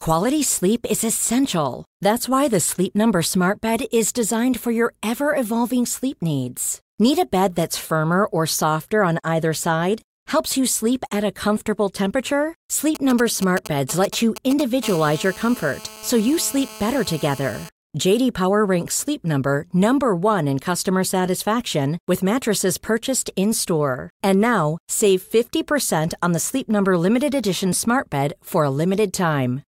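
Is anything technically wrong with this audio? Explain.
Yes, a nearby 2G mobile phone is interfering with this speech in two stages.

From 12.95 to 14.85 s there are GSM signalling bursts. The phone sends short groups of radio bursts and the audio circuit rectifies them, producing a galloping dit-dit-dit of short 217 Hz buzzes, roughly 10 dB below the speech. A spectrogram shows them as clustered vertical stripes with a harmonic comb.

From 14.85 to 17.69 s this becomes a continuous GSM phone buzz as the phone settles into a call. Its steady 217 Hz transmit bursts are rectified into a hard, raspy buzz at about 18 dB below the speech, unrelated to the audio. A spectrogram shows unbroken horizontal lines at 217 Hz multiples, and the waveform shows a regular pulse train.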